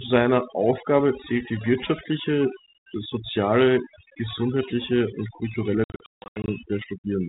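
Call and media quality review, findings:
Call and media quality review, findings:

Overdone noise removal, whole clip: background pushed down and broken into twinkling specks. Denoiser set too hard, cutting bands near its noise estimate and taking quiet speech detail with them.

Packet loss on the ADPCM call, 5.84–6.52 s, right after "soziale gesundheitliche und kulturelle": hard-edged dropouts totalling about 420 ms over 640 ms, longest 160 ms, around twenty packets. Decoder predictor and step size drift, so speech returns slightly distorted.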